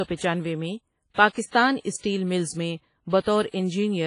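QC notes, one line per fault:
Throughout, WMA compression, likely: the speech rings and sounds washy, with hiss that swells and fades alongside it, and nothing survives above 10.1 kHz. Long transform blocks smear quantisation noise over tens of milliseconds, and the heavy damage fits a bitrate around 24 kbps.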